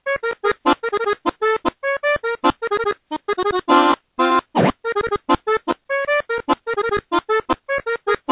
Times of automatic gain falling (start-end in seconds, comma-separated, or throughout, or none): none